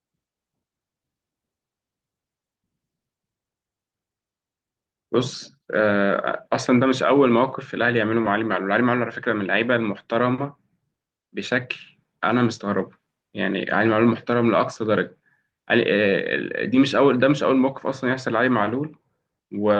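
No technical faults can be heard in this speech recording, so there is nothing to describe in time order.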